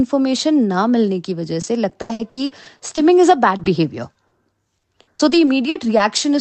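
From 1.61 to 3.67 s the speech turns choppy and robotic. This is repeated packet loss: eleven dropouts, the longest about 80 ms, together about 20% of the span. Each gap is patched by extending the last sound. On a spectrogram this shows as repeated, smeared harmonic stubs. In the waveform, frozen cycles alternate with real ones.

Between 4.13 and 4.17 s, and again between 4.27 and 4.33 s, there is short concealed packet loss. Roughly 20 ms and 40 ms of audio went missing, and each hole was filled by continuing the previous sound before blending back. Each one is heard as a brief smear or wobble. On a spectrogram it appears as a short, flattened patch, and the waveform shows a repeated stretch.

From 4.79 to 6.17 s the repeated packet loss returns. There are seven gaps, the longest about 60 ms, covering roughly a fifth of the span. The same choppy texture and the patched, repetitive spectral blocks appear, within the call codec's 8 kHz bandwidth.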